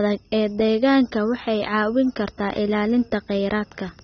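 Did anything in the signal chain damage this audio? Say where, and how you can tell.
Yes, at the codec stage. The speech sounds dull and smeared across the whole clip, with nothing above about 6.3 kHz, and sibilants and held vowels carry a warbling, fizzy texture. That is likely AAC compression with AAC-LC at a low bitrate, consistent with roughly 24 kbps. The encoder lowers its bandwidth to save bits and coarsely quantises the remaining frequency lines frame by frame, leaving gaps and swirling artefacts that are plainly audible.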